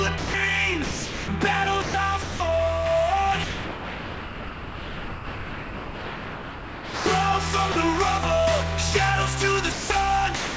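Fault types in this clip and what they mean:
Sound dropped by the voice detector: eight gaps where sound gives way to steady noise, likely from a voice detector halting transmission; spectrograms show flat, featureless bands, the longest about 3.6 s.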